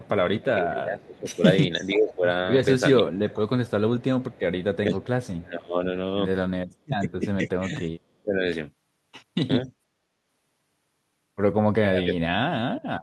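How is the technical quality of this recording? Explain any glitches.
The speech is marred by a far-end echo problem that shows up two ways, leaking echo and chopped talker audio, through much of the clip.

Echo leak appears at 0.0 to 0.09 s, 1.9 to 2.15 s and 3.48 to 5.42 s: a faint copy of the voice trailing about half a second (474 ms) behind, roughly 20 to 30 dB down. The likely cause is a loudspeaker end whose echo canceller let some of its mic pickup slip back.

Speech suppressed in double talk hits at 0.1 to 2.25 s, 3.0 to 3.52 s, 4.39 to 5.82 s, 6.84 to 8.43 s and 11.84 to 12.39 s. The voice dips and drops out in pieces, by roughly 20 dB and up to about 40 dB near 12 s. The likely cause is the canceller mistaking overlapping talk for echo and ducking it.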